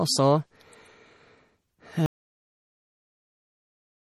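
MP3 compression runs through the whole recording. The speech has the watery, swirling quality of plainly audible codec damage, with nothing above 16.9 kHz. That is most likely an MP3 encoder starved of bits: it cuts the treble at a fixed point and drops quieter frequency lines, which flicker in and out from frame to frame. The smeared consonant attacks and metallic sibilants fit a low bitrate around 48 kbps.

An audio dropout to silence begins at 2.06 s and lasts to the end of the clip. The sound stops abruptly mid-flow and is replaced by silence, with no room tone or background remaining. The likely cause is a loss of the input signal, from a disconnected device, a failed link or a mute, while recording or encoding carried on writing silence. Everything after that point is missing.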